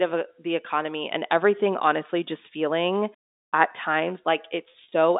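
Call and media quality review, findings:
Packet loss with pitch repetition, 4.72–4.92 s. Brief held, buzzy patches near clip end; 80 ms missing across 200 ms, longest gap 40 ms, consistent with roughly four 20 ms packets dropped. Receiver-side concealment repeats the last pitch period to bridge each gap; runs too short to fade to silence. Heard through the G.711 line band, about 250 Hz–3.7 kHz.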